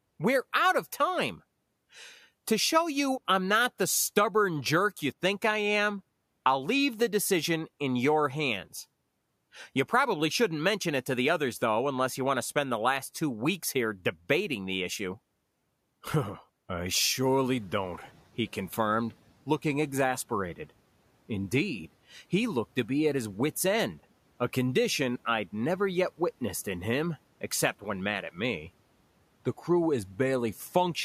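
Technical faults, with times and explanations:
17.22–18.27 s, noise suppressor catching up: just after 17 s the room noise jumps by about 11 dB to about 28 dB below the speech and comes through with less reduction at first, then sinks over roughly a second, settling by "he confirmed looking exasperated". The suppressor's estimate of the background was still tuned to the quieter room, so it took about 1.05 s to adapt before applying its full cut of about 8 dB.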